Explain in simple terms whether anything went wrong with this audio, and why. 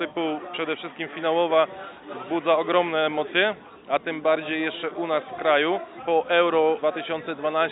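Nothing went wrong here: there's no moment in the recording where the sound breaks, jumps or gets mangled, so there's nothing to explain.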